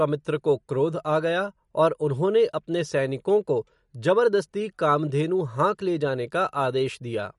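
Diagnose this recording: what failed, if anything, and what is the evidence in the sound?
MP3 compression throughout the clip, at the codec stage: the speech has nothing above 11.2 kHz and a plainly audible watery, swirling texture. The likely cause is an MP3 encoder short of bits, which fits a low bitrate near 48 kbps, cutting the treble and toggling weak frequency lines between frames.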